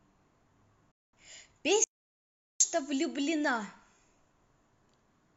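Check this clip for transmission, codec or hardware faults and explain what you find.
Two faults are audible, both gaps in the speech.

From 0.91 to 1.17 s there is a digital broadcast dropout. The receiver muted after losing valid frames, fading out over about 3 ms and losing roughly 213 ms of speech, consistent with a handful of corrupted frames. The result is a brief, clean hole.

From 1.84 to 2.60 s there is an audio dropout to silence lasting about 764 ms. The speech cuts off and returns mid-flow, with silence and no room tone between. The likely cause is a lost input while recording continued.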